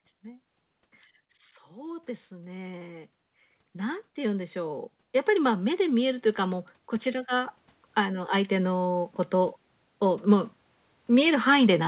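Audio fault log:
3.73–10.54 s, automatic gain rising: speech and background noise swell together by about 11 dB over almost seven seconds. The gain control judged the input too quiet and raised its gain gradually, so the floor lifts with the speech, all within the telephone band ending at 4 kHz.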